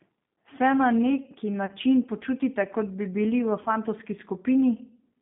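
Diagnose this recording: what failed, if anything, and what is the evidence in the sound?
Rough, slightly synthetic speech held within about 150 Hz to 3.6 kHz throughout points to the codec stage: the G.729 codec, consistent with 8 kbit/s, rebuilding the voice from a filter and pitch model.

Brief, fading smears at 1.66 to 1.72 s and 3.63 to 3.69 s come from VoIP packet loss concealed by the speech codec. Each fits a single lost 30 ms packet, with the decoder extrapolating its last pitch before recovering.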